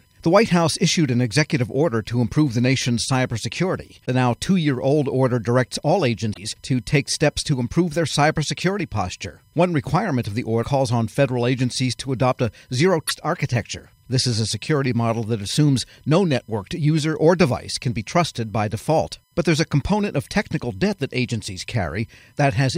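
Throughout the speech runs a USB whine: a fixed tone built on 1 kHz, loudest at its 5 kHz harmonic and roughly 45 dB below the signal. Current drawn in 1 ms bus frames leaks through power or ground, drawing steady horizontal lines at 1 kHz multiples on a spectrogram.

At 4.02 to 4.08 s, 6.30 to 6.38 s, 10.60 to 10.65 s and 13.07 to 13.11 s, damaged data in the compressed stream makes the decoder misread frames and lose sync. Each shows as a brief broken chirp, click or gap: a smeared vertical patch on the spectrogram, a discontinuity in the waveform.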